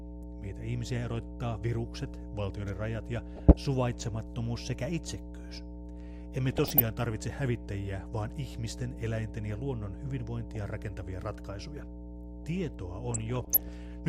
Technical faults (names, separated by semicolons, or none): mains hum; DAB burbling